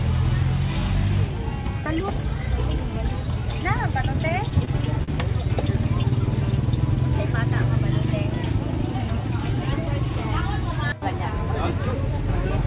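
From 4.16 to 5.10 s there are repeated stalls (stutter). The jitter buffer ran dry five times. Each time the receiver stretched the last sound, about 92 ms in all, the longest hold 40 ms. Nothing is lost, but the sound drags and hiccups, over a band capped near 4 kHz.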